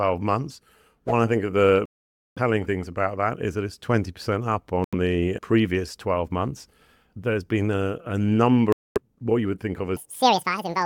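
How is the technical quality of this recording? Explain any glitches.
The recording has two kinds of glitch: three sudden gaps and a final stretch that runs too fast.

Between 1.86 and 2.39 s, 4.84 and 4.94 s, and 8.72 and 8.98 s, the sound cuts out for about 0.5 s, 0.09 s and 0.23 s, then resumes further along, as if it had kept playing. This is likely a Bluetooth dropout: late wireless packets were discarded, leaving silence.

From 9.97 s to the end, the audio plays at 1.97 times normal speed, so it sounds hurried and raised in pitch by about ten semitones. This is likely a section at the wrong speed, where that part was played against the wrong clock.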